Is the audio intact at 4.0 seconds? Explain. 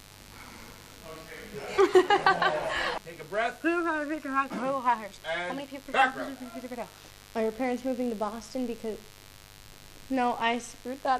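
No. At 4.0 s, two faults are present. The first is mains buzz, which runs through the whole clip. Sharp switching spikes from the 50 Hz supply get into the signal path twice in every mains cycle. They add a ladder of 50 Hz harmonics that reaches into the kilohertz range, sitting about 25 dB below the signal. At 4.0 s it sounds like the rest of the clip: a steady, raspy buzz under the sound.

The second is clock slip clicks, which run from 0.15 s to 11.13 s and so cover 4.0 s. Two devices are likely running on separate, unsynchronised clocks that differ by something like 400 ppm. Whenever that drift builds up to a whole sample, one sample is dropped or repeated. That happens roughly every 70 ms, some 200 times across that span. Each slip is heard as a small tick, and at this rate they form a regular soft rattle.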